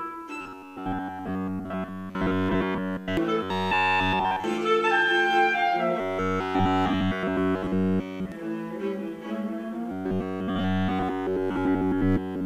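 From 0.41 to 3.17 s, 3.43 to 4.44 s, 6.01 to 8.32 s and 9.92 to 12.45 s there's robotic sound from repeated short buffers: a rigid metallic buzz at 93.8 Hz. It's likely a starved stream looping roughly 11 ms chunks of the same audio.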